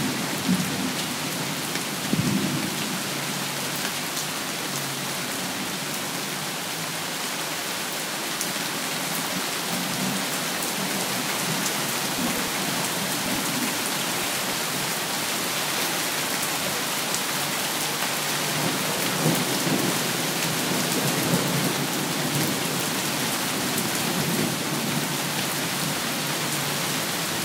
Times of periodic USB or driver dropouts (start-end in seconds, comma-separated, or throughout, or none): 11.89-15.81